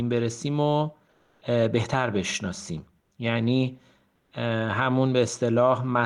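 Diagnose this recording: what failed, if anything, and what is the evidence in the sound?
At 1.11–1.41 s, 3.01–3.11 s and 4.15–4.31 s the faint background turns into steady, featureless hiss, about 4 dB louder first, then about 2 to 3 dB quieter. This is comfort noise in place of the background, likely codec discontinuous transmission, with the receiver synthesising shaped noise.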